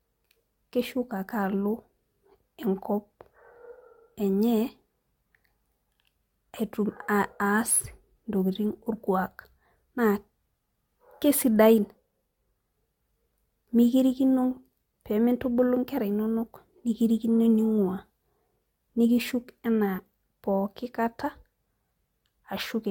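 Generation loss throughout: swirly, hollow speech with blurred onsets, likely from several AAC re-encodes. The spectrogram looks patchy, full of holes, and empty above 17.1 kHz.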